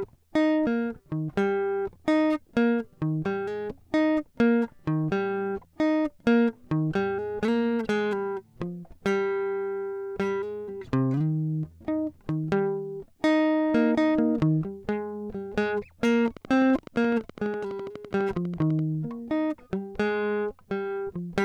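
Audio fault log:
16.28–18.80 s: train of clicks. A steady ticking sits on top of the music for about two and a half seconds, roughly thirty clicks in all. They arrive at a regular 11.9 per second, each one much the same shape. They peak at about the level of the music itself. The even pace points to a repeating disturbance, likely interference from nearby equipment or a faulty connection or power supply.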